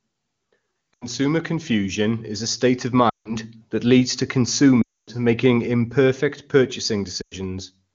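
The sound smears and fades toward silence four times: at 0.93 to 1.06 s just before "confusion is a state", at 3.09 to 3.36 s between "is a state of" and "that leads to", at 4.82 to 5.10 s between "that leads to" and "making imperfect", and at 7.22 to 7.37 s. These are lost AMR speech frames. Corrupted frames were replaced by repeating the last good pitch and vocal tract settings at shrinking gain, bridging about 80, 160, 260 and 100 ms of missing audio.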